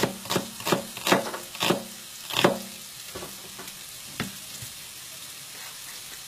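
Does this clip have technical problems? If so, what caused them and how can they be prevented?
Yes. Throughout, the treble sounds gritty and metallic, with nothing above 14.9 kHz, likely HE-AAC compression rebuilding highs from copied lower bands, consistent with roughly 20 kbps. Encoding at a higher bitrate, or with plain AAC or a lossless format, would prevent it.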